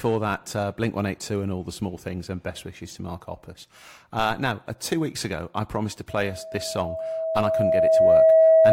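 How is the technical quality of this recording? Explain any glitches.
The recording is marred by loudspeaker feedback squeal in its final stretch. From 6.09 s, just after "ago I promised to", a tone at 645 Hz rises and runs to the end of the clip. The microphone is hearing the loudspeaker it drives, and at 645 Hz the loop gain exceeds one, so that frequency feeds on itself. It swells over roughly two seconds into a steady howl, ending up around 15 dB above the speech.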